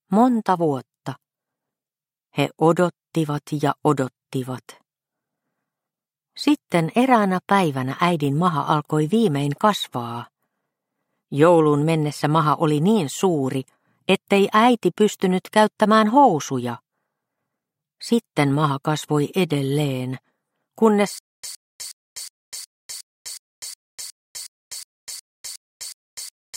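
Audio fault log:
21.19–26.56 s, stutter with silent gaps: the same 114 ms burst keeps returning every 364 ms, about 14 times, with 251 ms of dead digital silence between repeats, running to the end. A likely playback or stream stall replays the last fragment at each retry, losing the audio meant to follow.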